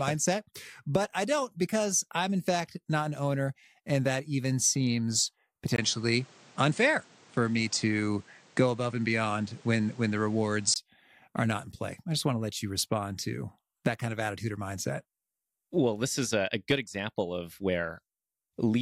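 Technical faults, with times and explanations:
5.76–10.76 s, input switched to a poorer device: just after "that even seems", a 20 ms gap, then the band stops near 9.3 kHz with a new noise roughly 30 dB down at unchanged level, until "are not in play". The gap and changed noise floor point to a likely device change rather than filtering.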